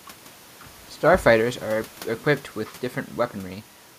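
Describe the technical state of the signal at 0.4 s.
At 0.4 s the speech signal is intact, with no audible technical fault.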